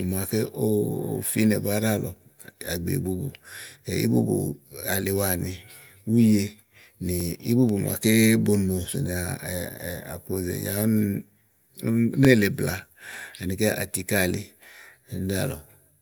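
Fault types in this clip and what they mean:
Overlapping chunks: every 2.5 s, a 21 ms sliver of sound plays twice, causing a regular stutter where audio repeats instead of dropping out.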